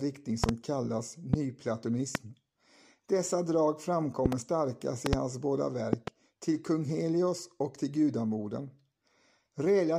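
Loud pops hit the speech at 0.44, 1.34, 2.15, 4.26, 5.06 and 5.93 s, doubled except at 1.34 and 2.15, roughly 20 dB above it. They are likely voltage spikes, seen as tall waveform spikes and full-height spectrogram stripes.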